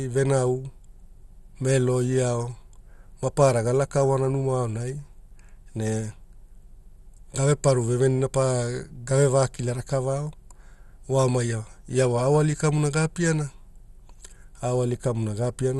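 From the start, the speech is dull and gurgly, with a granular roughness riding on every syllable; this is MP2 compression, likely at a starved rate such as 64 kbps, where upper sub-bands lose their bits. A spectrogram shows nothing above 12.1 kHz and flickering, blocky upper bands.

From 0.21 s to 15.76 s, clock slip clicks form a faint, steady tick about ten times a second, around 150 in all, likely from unsynchronised clocks differing by roughly 150 ppm, dropping or repeating one sample each time. The waveform shows tiny regular discontinuities, and the spectrogram shows faint evenly spaced vertical lines.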